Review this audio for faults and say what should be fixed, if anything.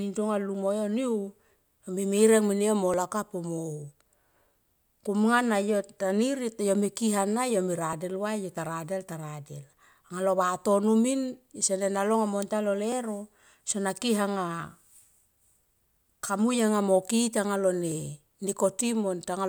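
Audio missing between chunks at 2.94, 7.93, 12.92 and 17.92 s: brief skips spaced every 5 s, each dropping a few milliseconds and butting the two sides together, likely from a 5-second chunked recorder losing samples at each handover. Overlapping or double-buffering the chunk boundaries would prevent it.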